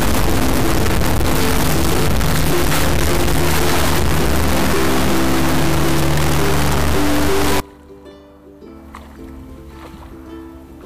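From the start to about 7.60 s the audio becomes a harsh, extremely loud buzzing square wave that snaps between silence and the clipping ceiling, going quiet only in the softest moments. This is integer read as float: 32-bit integer samples were interpreted as 32-bit floating-point values, so most become tiny or enormous numbers.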